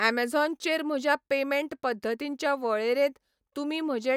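No technical faults are audible.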